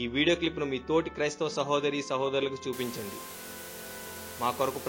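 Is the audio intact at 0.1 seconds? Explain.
Yes, at 0.1 seconds the audio plays through cleanly, with no dropout, click, distortion or other fault to be heard at that moment.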